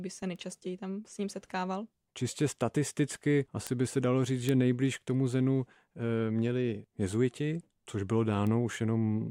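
A single flipped bit in the digital samples, a bit error spike, makes the speech jump by a power of two for one sample and return, heard as sharp broadband ticks: 0.36 s before "tam s ním setkával" (about -34 dBFS), 3.67 s, and 4.49 s after "by se dalo říct" (both about -10 dBFS), and 8.47 s after "měli jezuiti což bylo" (about -22 dBFS).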